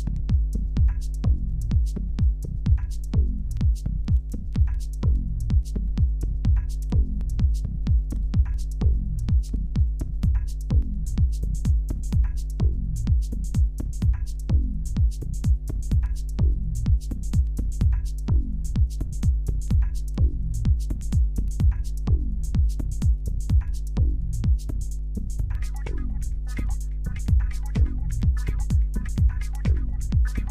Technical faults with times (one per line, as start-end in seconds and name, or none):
0.00-30.50 mains hum